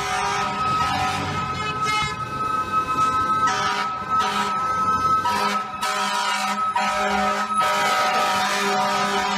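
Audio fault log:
2.02 s, compressed frames skipped: the audio jumps ahead with nothing missing in the timeline, losing about a tenth of a second, which fits a single whole frame of roughly 93 ms that the decoder never played. Unlike a dropout there is no silent gap, only material that never arrives.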